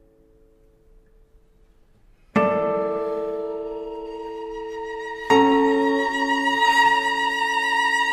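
No technical faults are audible.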